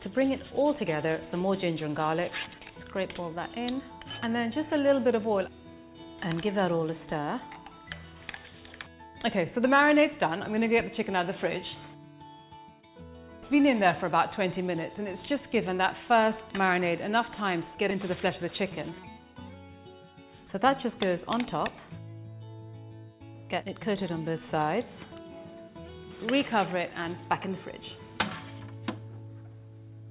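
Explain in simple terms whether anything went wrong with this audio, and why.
Nothing went wrong; no problems can be heard here.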